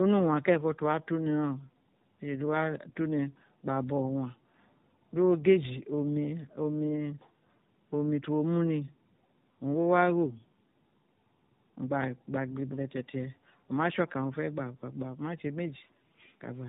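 Throughout the clip the speech shows tandem speech coding. It sounds like two low-rate speech codecs in a row, consistent with iLBC followed by AMR-NB, the later one re-encoding the earlier one's errors. Nothing reaches above 3.8 kHz, leaving it muffled, rough and warbly.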